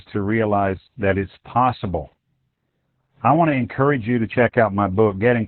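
Opus voice compression affects the whole clip. Nothing survives above 4.2 kHz, which points to a narrowband linear-prediction mode. The coarse excitation coding leaves the speech muffled, hoarse and faintly robotic. Damage this heavy fits a bitrate around 8 kbps.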